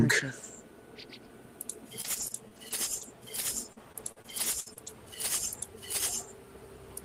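Repeated packet loss hits twice, from 2.01 to 3.03 s and again from 3.73 to 4.88 s. Packets kept going missing, and each hole was patched by extending the preceding sound. The result is choppy, with pieces missing. The second stretch is rougher, with gaps up to 60 ms against 26 ms in the first.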